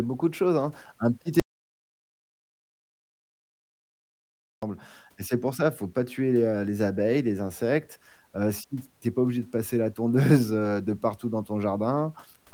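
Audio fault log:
1.40 to 4.63 s, audio dropout to silence: the speech cuts off mid-flow and about 3.23 s of dead silence follow, with no room tone at all, likely from the input dropping out while recording continued; it picks back up at "et c'est pour ça".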